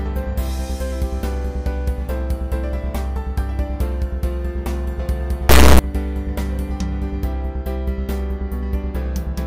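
At 5.49 s the audio suddenly turns into a harsh, extremely loud buzz that lasts until 5.79 s, a classic integer read as float fault. It sounds like the samples were stored as 32-bit integers and then interpreted as 32-bit floats, so the bit patterns come out either as tiny near-zero values or as huge, invalid numbers. The output slams between silence and the clipping limit, which is why that 0.3 s stretch comes across as a brutal square-wave blast.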